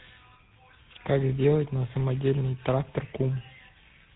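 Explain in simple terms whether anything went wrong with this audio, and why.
Something did go wrong, and it lasts the whole clip: tandem speech coding. The call passed through two different speech codecs in a row, one of them the GSM coder used on mobile phones, so it was squeezed, unpacked, and squeezed again. The second coder had to work on already damaged sound, and the damage stacks up. That's why the speech is rough, a bit warbly, and muffled, with nothing above about 3.9 kHz.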